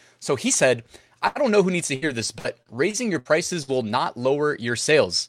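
At 1.27 s, right after "he said", there is a short stall from a late packet lasting until 1.38 s. The jitter buffer ran dry, so the receiver stretched the last sound for about 80 ms until the packet arrived, then carried on from the same point before "don't know who needs". Nothing is lost; the sound is simply held too long, with a slight buzz or dip, and the later audio arrives about 80 ms behind.

From 1.95 s to 3.71 s, following "know who needs to", repeated packet loss gives a choppy quality. Seven separate gaps fall in this stretch. Each was patched by extending the preceding sound, about 310 ms in all, roughly 18% of the span, and about 240 ms of audio is missing outright. The longest single gap is 66 ms, and the holes come close together.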